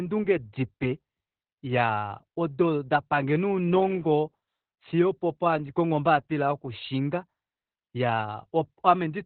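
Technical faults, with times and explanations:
Throughout: Opus voice compression. The codec ran in its SILK linear-prediction mode at a rate that fits about 8 kbps, cutting the band to narrowband, so nothing remains above about 4.3 kHz; coarse excitation coding leaves the speech muffled, hoarse and faintly robotic.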